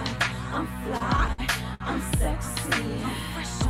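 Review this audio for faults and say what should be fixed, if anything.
Repeated stalls (stutter) run from 0.97 s to 1.82 s. The sound catches and drags five times in that stretch. Packets were arriving late, so the jitter buffer kept running dry. Each time, the receiver stretched the last sound to cover the wait. The longest hold lasts about 60 ms. Together they fill 170 ms, roughly a fifth of that span. Nothing is lost, but the flow hesitates. A deeper or adaptive jitter buffer on a steadier network path would prevent this.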